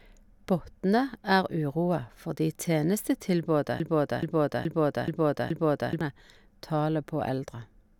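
From 3.80 s to 6.01 s, just after "fordi tenestetilbodet", the speech locks into a broken-record loop: a fragment about 0.43 s long plays five times in a row, identical each time and joined back to back with no gap. Whatever should have followed in those two seconds never arrives. The likely cause is a stall in the player, encoder or stream, which kept resending the last buffered fragment until the feed resumed.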